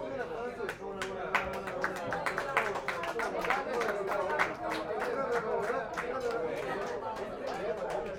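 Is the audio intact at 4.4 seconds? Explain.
Yes, the audio plays through cleanly at 4.4 seconds with no audible fault at that moment.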